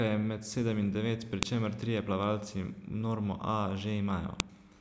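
At 1.43 s and again at 4.40 s the speech is cut by a sharp, loud snap, a file header played as audio. Where separate WAV pieces were joined without stripping their headers, those few dozen bytes of header data are read as samples. Unlike a buffer underrun click, no sound goes missing around them, and their loudness ignores what the speech is doing, marking the boundary where each new piece begins.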